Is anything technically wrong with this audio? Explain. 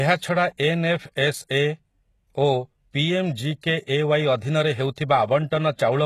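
Yes. Throughout the speech, the s sounds are gritty and metallic, and the treble sounds synthetic, with nothing above about 12.3 kHz. This is likely HE-AAC compression: the treble is rebuilt from copied lower bands rather than coded, which fits a heavily compressed stream of around 16 kbps.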